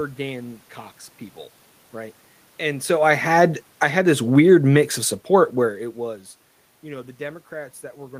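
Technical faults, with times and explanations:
3.09–5.88 s, automatic gain falling: the level eases down by about 5 dB over nearly three seconds as the gain control reacts to input it judged too loud or too noisy and slowly backs off. What separates this from the talker moving away, which happens around 2.5 s and again around 5.5 s, is that the room noise sinks by the same amount as the speech. A change in distance would alter only the voice and leave the background steady.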